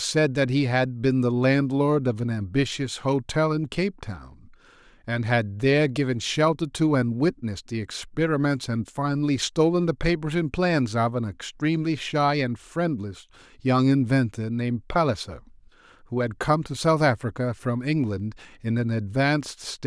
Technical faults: none

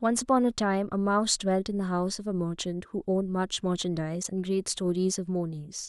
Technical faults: damaged data in a compressed stream

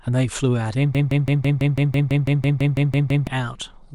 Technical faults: broken-record loop

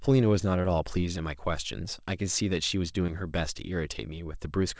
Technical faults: short concealed packet loss

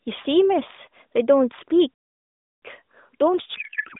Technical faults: playback stall; codec payload misread

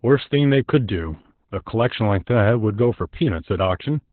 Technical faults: Opus voice compression

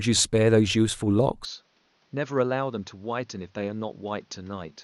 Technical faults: input switched to a poorer device

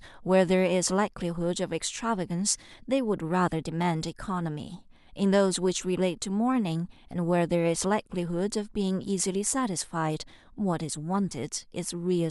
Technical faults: none

